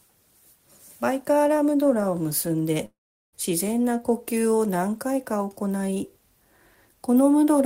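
A long network dropout, likely from the connection stalling, stopped incoming audio from 2.85 to 3.35 s. The receiver stretched the last sound into a fading buzz that gives way to about 0.4 s of near silence, and the audio resumes with 0.48 s lost.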